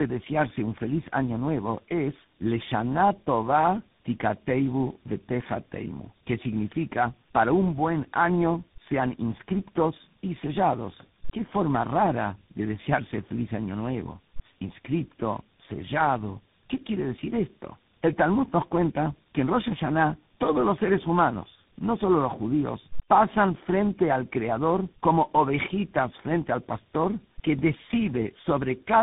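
From start to finish the speech sounds rough, muffled and warbly, with a gritty texture and nothing above about 3.8 kHz. This is tandem speech coding: the signal seems to have passed through three separate speech coders in a row, likely an AMR-NB stage, then GSM full rate, then CVSD, with plain telephone-band links between them. Each coder re-encodes the previous one's already damaged output, so the roughness and warble build up.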